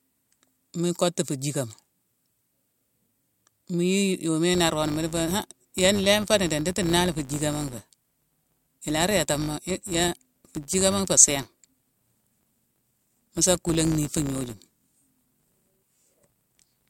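From 4.54 s through to the end, the speech picks up a steady 100 Hz buzz: a filter restarted on every block. It's dropping its internal state at each block boundary and starting again from silence, so every block opens with a tiny transient. At 100 per second those ticks fuse into a buzz, which points to blocks of roughly 10 ms. The buzz swells and fades with the speech level.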